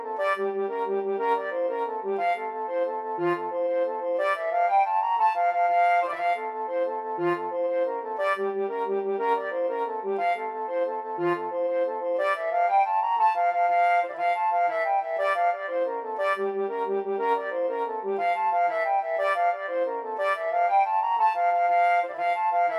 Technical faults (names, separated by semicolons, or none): overlap-add ripple